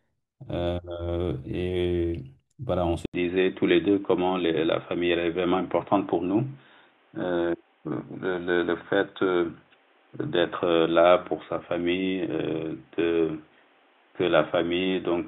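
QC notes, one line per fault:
3.06 s to end: input switched to a poorer device. After an 80 ms gap, the speech turns dull and boxy, with nothing above 3.8 kHz and a new noise floor roughly 35 dB down, at much the same level. This is likely a change of capture device.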